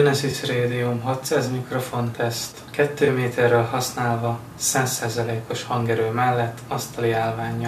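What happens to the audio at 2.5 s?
At 2.52 s the level falls abruptly by about 6 dB and stays down until 2.57 s, a 50 ms dip before it snaps back. This is a brief one channel drops out event: one side of the stereo pair likely went silent, so the mono sum kept only half its shared content. On a waveform it shows as a sudden, flat-edged step in amplitude; on a spectrogram, a thin vertical band dimmed evenly across all frequencies.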